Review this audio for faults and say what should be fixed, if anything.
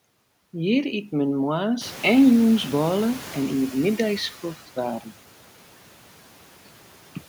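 From 1.81 to 4.22 s the noise suppressor is catching up. The room noise jumps by about 15 dB at around the 2 second mark, and for roughly 2.4 s it leaks through under-reduced before sinking by about 8 dB as the suppressor's noise estimate adapts. Giving the suppressor a faster adaptation rate for sudden noise increases would shorten that leak.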